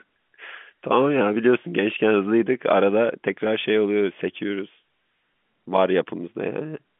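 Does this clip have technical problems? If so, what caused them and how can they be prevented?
No, there's nothing to fix here: the audio simply carries the narrow band of an ordinary phone line, from about 150 Hz up to 3.4 kHz, which is just what normal G.711 telephone coding gives you.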